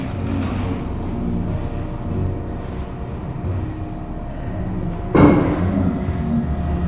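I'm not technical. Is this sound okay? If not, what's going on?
No. The whole clip has a wrong sample rate fault: it plays at half its proper speed, so everything lasts twice as long and sits a full octave (12 semitones) lower. That fits audio meant for 16 kHz being played back at 8 kHz. Unlike slowed playback that keeps pitch steady, or a pitch shift that keeps timing, here speed and pitch drop together by exactly the same factor, from start to finish.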